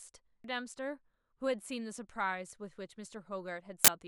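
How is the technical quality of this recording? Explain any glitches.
Two glitches in this speech recording come from damaged data in a compressed stream, once at 0.44 s and again from 3.51 to 3.88 s. Part of the encoded data was corrupted, so the decoder misread those frames, lost its place and had to hunt for the next valid frame header before playing cleanly again. At 0.44 s this comes through as a brief blip, while the later, longer stretch sounds like a squawking, chirpy burst in place of the speech.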